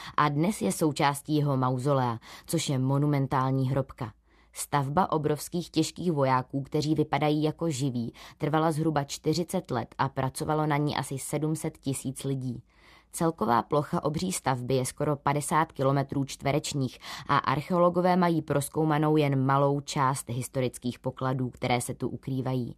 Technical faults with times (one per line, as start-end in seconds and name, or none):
none